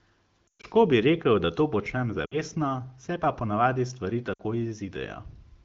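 Lost AMR speech frames break the speech three times. From 0.48 to 0.67 s, just before "bi rekel da to", a run of about 120 ms drops to near silence. After "rekel da to počnem" (2.25 to 2.39 s) and after "se pa ponavadi stvari" (4.33 to 4.41 s), shorter 60 ms gaps break the voice briefly. The decoder repeats its last good settings with falling gain, so spectrograms show frozen, fading harmonics and waveforms show decaying amplitude, through the lightly coloured wideband codec.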